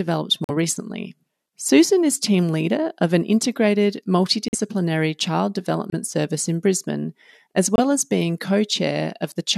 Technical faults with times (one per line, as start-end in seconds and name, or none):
0.44-0.50 corrupt frame muted
4.48-4.55 corrupt frame muted
5.90-5.94 corrupt frame muted
7.76-7.79 corrupt frame muted